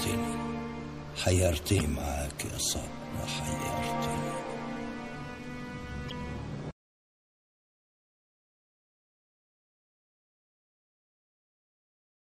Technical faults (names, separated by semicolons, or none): MP3 compression; damaged data in a compressed stream